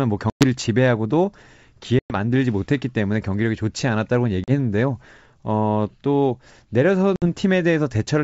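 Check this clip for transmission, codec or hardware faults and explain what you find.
The clip has one kind of fault: packet loss on an ADPCM call, with four dropouts at 0.30–0.44 s, 1.99–2.15 s, 4.44–4.51 s and 7.16–7.26 s. The lost audio runs about 110 ms, 110 ms, 40 ms and 60 ms respectively. Each gap is filled with abrupt silence. The decoder's adaptive predictor and step size then no longer match the sender's, so the speech resumes with brief, slight distortion before resynchronising. The wideband band-split coding sounds consistent with G.722's full 64 kbit/s mode.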